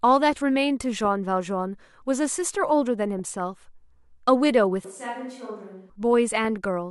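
From 3.19 to 3.37 s there is DAB burbling. Weak reception has let a small fraction of a percent of bit errors slip past the error correction into the MP2 stream, damaging a short run of frames. The result is short blips of noise in single sub-bands over the speech, lasting a little under two tenths of a second.

Between 4.84 and 5.90 s the sound abruptly becomes hollow and roomy, thinner in the bass, and drops by about 10 dB. Room noise rises to roughly 35 dB below the speech. The sudden onset and return indicate a switch to a distant microphone, likely because the close microphone's signal dropped out and a farther pickup was used instead.

At 6.45 s a second, very brief DAB burble appears, momentary blips of noise from the same kind of uncorrected bit errors corrupting a few frames.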